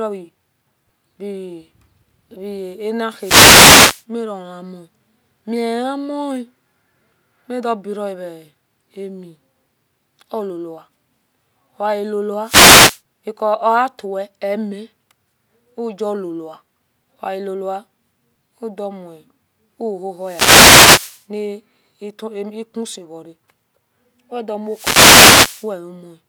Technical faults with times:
3.16-4.05 wireless microphone noise hit
12.42-13.01 wireless microphone noise hit
20.18-21.26 wireless microphone noise hit
24.66-25.73 wireless microphone noise hit

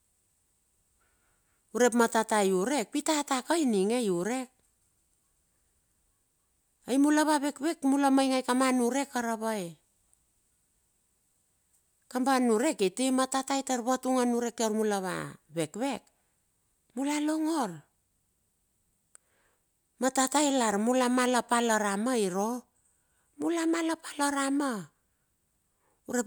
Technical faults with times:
none

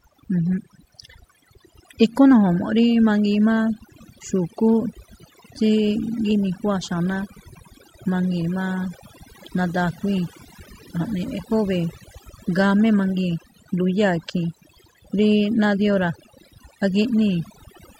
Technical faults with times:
0.00-18.00 overdone noise removal

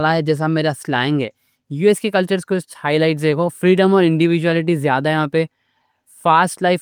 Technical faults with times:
none

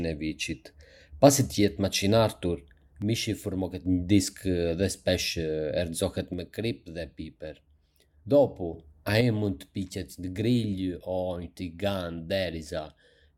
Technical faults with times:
3.02-3.86 one channel drops out
6.34-8.74 one channel drops out
9.21-13.38 one channel drops out

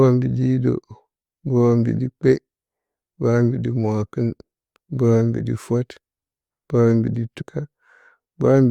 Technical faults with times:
7.40 stream segment skipped

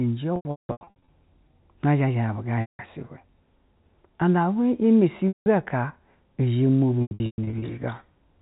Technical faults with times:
0.36-1.08 packet loss with pitch repetition
2.61-2.79 packet loss with pitch repetition
5.28-5.46 packet loss with pitch repetition
7.02-7.62 packet loss with pitch repetition

